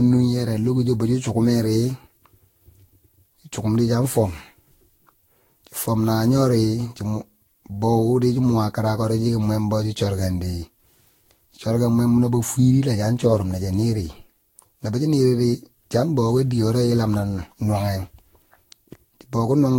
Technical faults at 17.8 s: generation loss

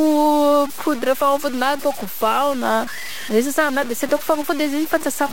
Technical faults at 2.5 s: low bit depth without dither

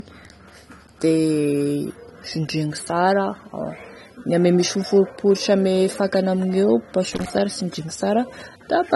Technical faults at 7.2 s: low-bitrate audio saved at a high bitrate; loose connector crackle

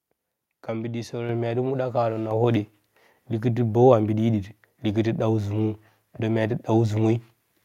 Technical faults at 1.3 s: microphone volume stepped up

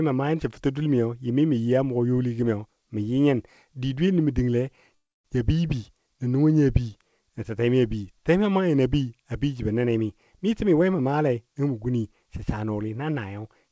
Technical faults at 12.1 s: none

